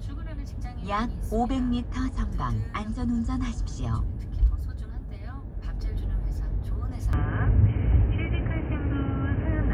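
At 7.13 s the audio turns abruptly dull and boxy, with nothing above about 3.1 kHz, and stays that way to the end. There is no gap at the change, but the level shifts by around 5 dB and a new background hiss appears, roughly 30 dB under the signal. This is likely an input switched to a poorer device partway through, such as another microphone or a headset's narrowband call profile, bringing its own tone, gain and noise floor.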